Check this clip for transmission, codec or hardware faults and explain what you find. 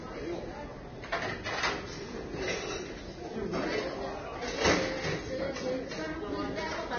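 One codec fault runs through the whole clip: heavy Vorbis compression. Throughout, the encoder was likely run at a very low rate, consistent with about 20 kbps. It discards everything above 6.5 kHz and quantises the remaining treble residue so coarsely that fine detail turns into noise of similar energy. The sound comes across dull yet hissy and grainy, with roughened tones and smeared attacks.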